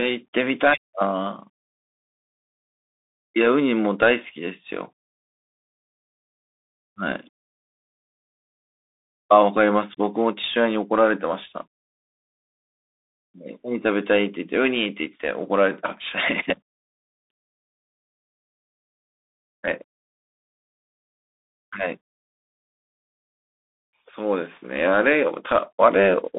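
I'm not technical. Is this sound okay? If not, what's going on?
No. From start to finish the speech has passed through a Bluetooth CVSD headset codec, the basic phone-quality link used by wireless headsets. It sends the sound as a fast stream of single up-or-down steps, and nothing above about 3.8 kHz gets through, so the voice sounds thin and muffled. The damage is plainly audible: the steps can't keep up with sharp, bright sounds, so s sounds turn scratchy and a grainy hiss sits under the speech.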